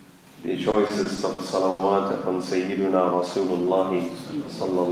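Repeated stalls (stutter) run from 0.71 s to 1.81 s: packets arrived late, emptying the jitter buffer six times. The receiver stretched the last sound through each gap, 220 ms in all, the longest 90 ms, so nothing is lost but the audio halts and drags.

A jitter buffer slow-down follows from 2.82 s to 3.66 s. Rebuilding its reserve, the receiver repeated short stretches of the waveform, adding 76 ms and playing that span at 92% speed. Sounds there come out drawn out, with the pitch unchanged.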